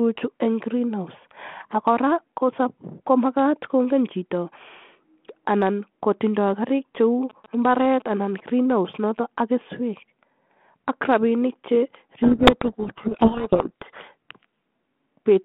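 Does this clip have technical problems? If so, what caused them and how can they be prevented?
Yes. From 7.30 to 9.20 s there are GSM signalling bursts. A nearby 2G phone sends short groups of radio bursts, and the audio circuit rectifies them. This gives galloping ticks and short 217 Hz buzzes, roughly 20 dB below the speech. To prevent it, keep mobile phones well away from the equipment and cables.

From 12.23 to 14.09 s there is a codec payload misread. The two ends disagree on the bit order of the G.726 code words. The decoder puts each bit in the wrong place, so the speech is buried in harsh distortion. The underlying G.726 coding shows only light damage, consistent with 32 kbit/s in a 150 Hz to 3.4 kHz band. To prevent it, configure both ends to use the same G.726 bit packing.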